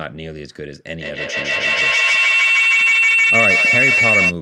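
A second device in the same room picks up the call's own output, so the loop from microphone to loudspeaker and back gains level on each pass. From 1.0 s to 4.36 s this feedback howl builds instead of fading, narrowing to a shrill tone around 2 kHz that pulses roughly every 150 ms, the loop's round-trip delay. At its loudest it sits about 7 dB above the speech.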